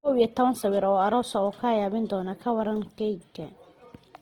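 The likely cause is Opus compression in its CELT music mode, starved of bits at what sounds like about 16 kbps. Throughout the speech, bands are filled by folding or noise, so it comes out plainly rough and grainy, though still extending to about 20.1 kHz.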